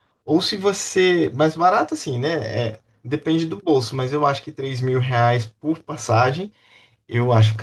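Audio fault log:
The speech signal stays steady and intact throughout, with its level, timing and continuity holding without disturbance.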